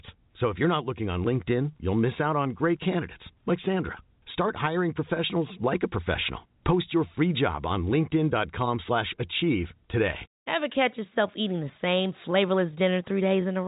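No technical faults can be heard in this speech.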